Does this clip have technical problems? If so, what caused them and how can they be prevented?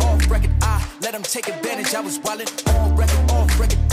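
No, no technical problems can be heard here.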